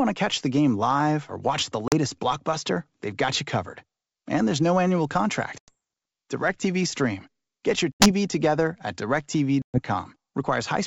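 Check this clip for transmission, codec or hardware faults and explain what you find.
The clip carries four instances of packet loss on an ADPCM call, heard over otherwise clean-sounding G.722 wideband speech.

The dropouts fall at 1.88–1.94 s (40 ms lost, between "live or watch the" and "blockbuster they've got you"), 5.58–5.76 s (100 ms, after "there's no annual"), 7.92–8.11 s (80 ms, before "together at") and 9.62–9.80 s (120 ms). Missing packets become silence, and the decoder's predictor and step size lose sync with the sender's. Each gap appears as a flat, hard-edged hole in the waveform and a vertical blank stripe on a spectrogram. The speech then returns with slight, brief distortion that settles within tens of milliseconds.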